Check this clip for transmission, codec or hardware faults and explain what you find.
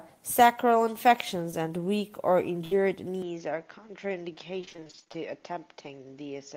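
The clip is speech, and it has four faults. Three come from lost packets. The fourth is a change in tone that most likely comes from a switch of input device.

Short concealed packet loss at 1.51 to 1.55 s, just before "and weak or". About 20 ms of audio never arrived in time. The decoder filled the hole by extending the last sound, then blended back into the real signal. You hear a brief smear or wobble. A tiny slice of speech is gone.

Burst of packet loss at 2.65 to 2.73 s, just after "and weak or". Here roughly 60 ms went missing in one run. The receiver stretched the last sound across the gap for about 63 ms and faded it down. The result is a short held, dimming sound in place of real speech. Then the talk resumes further on. The stretch in between is simply lost.

Input switched to a poorer device at 3.22 s, lasting to the end. The sound turns duller at once, with no silence at the join. 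Nothing remains above 6.9 kHz. The level drops by about 5 dB, and a new noise floor appears, roughly 45 dB below the speech. That narrower band, different level and fresh noise likely point to the system moving to another microphone or a headset's call profile.

Repeated packet loss (robotic sound) from 4.61 to 5.17 s. Packets went missing again and again, 14 short holes, the longest 23 ms. Each one was patched by continuing the previous sound. Nearly half of this stretch is synthetic fill. The voice turns choppy, with small pieces dropping out throughout.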